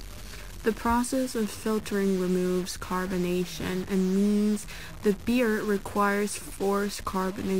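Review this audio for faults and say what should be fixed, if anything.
There's a harsh, buzzy grit on the speech from start to finish, and the pauses fill with a hiss at about -40 dBFS. That's likely a stuck bit: one data bit frozen, so roughly half the samples jump by its weight. Worth checking the converter and its data lines for a broken connection.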